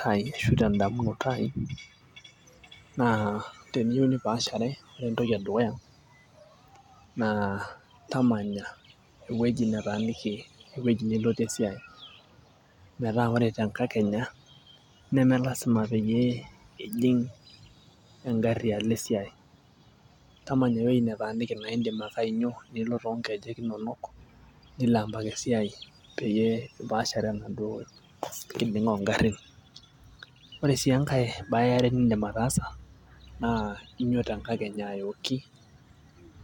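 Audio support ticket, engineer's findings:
No faults found in the speech audio. Nothing to timestamp and no component to flag.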